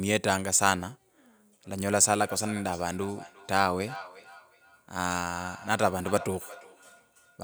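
Feedback echo between two devices runs from 2.0 s to the end: a second device's loudspeaker output re-enters the microphone, returning the speech roughly every 0.4 s, about 18 dB down.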